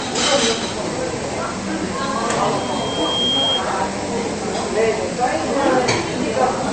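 From start to finish, nothing is present above about 8.6 kHz, so the top octave is simply missing and the sound comes across dull and boxed-in, with the smeared, swirly texture typical of a low-rate MP3 encode. This is likely low-bitrate audio saved at a high bitrate. The cut-off and artefacts fit a first pass at around 40 kbit/s. A later high-rate re-encode, perhaps 192 kbit/s, would leave that damage audibly intact.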